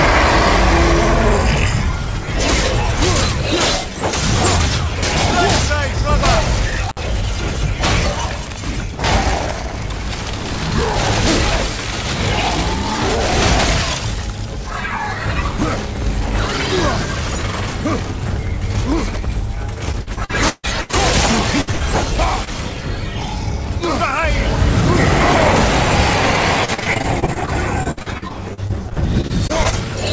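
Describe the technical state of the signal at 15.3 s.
At 15.3 s the signal is intact with no fault, the sound passing through a call path whose content stops at 8 kHz, as a wideband call codec such as G.722 would produce.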